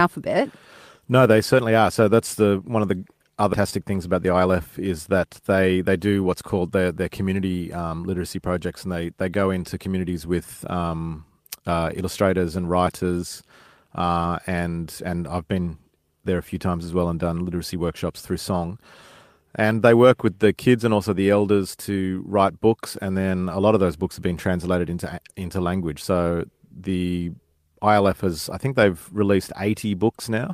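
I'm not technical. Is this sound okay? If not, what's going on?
No. There are two separate glitches in this speech, both in the first few seconds.

Skip ahead, at 3.53 to 3.55 s, right after "the one of the": the playback suddenly jumps forward, and about three-quarters of a second of speech is simply gone. Nothing fills the hole; the sound on either side is butted together almost directly. This happens when a chunk of audio gets lost in transit, or thrown away because later audio was already queued up and waiting.

Jitter buffer speed-up, from 4.15 to 4.47 s, just before "is that they they": for about a third of a second the talking runs roughly 14% faster, but the voice doesn't get higher. The receiving side had too much audio stored up, so it quietly snipped out many tiny slivers, together around a twentieth of a second, to catch up. That leaves the speech sounding briefly rushed.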